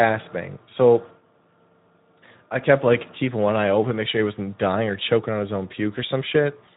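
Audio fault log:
throughout, Speex codec: the speech carries a plainly audible hoarse, grainy roughness on every voiced stretch, the sound of a CELP coder with too few bits to model the excitation, which fits a low setting of around 11 kbps. Unlike the swirly, watery warbling of a transform codec, or background hiss, the noise here is bound to the voice itself. It rises and falls with each syllable rather than sitting underneath as a steady layer.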